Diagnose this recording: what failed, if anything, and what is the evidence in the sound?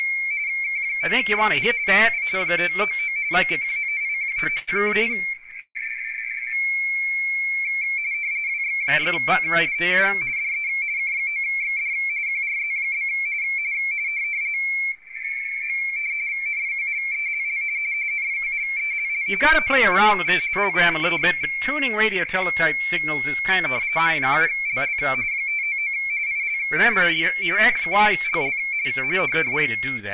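The fault lies in the network and jitter buffer stage of a narrowband call path. Nothing is heard above 4 kHz, which fits G.711 at 64 kbps. Repeated stalls (stutter) occur between 3.62 and 4.69 s, with 11 brief halts, the longest 82 ms, concealing about 18% of that span. They return between 5.19 and 5.77 s, with 6 halts up to 151 ms covering about 34%. Each halt is filled by stretching the preceding sound, and nothing is skipped afterward, which separates this from packet loss.

A jitter buffer slow-down follows from 6.67 to 7.17 s. The receiver repeated pitch periods to rebuild its reserve, adding 59 ms and running the audio at 90% speed. Pitch stays put while sounds draw out. Unlike the stutter, the flow never halts. It simply drags smoothly, and that continuous stretching, rather than stop-start gaps, is the tell.

A jitter buffer speed-up runs from 9.19 to 11.16 s at 108% speed, with roughly 150 ms trimmed as the buffer shed excess delay, and again from 28.67 to 29.27 s at 107%, with about 50 ms removed. 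The audio sounds hurried, yet its pitch does not rise. That rules out a sample-rate mismatch, which would shift pitch along with tempo, and points instead to pitch-period deletion in the receiver.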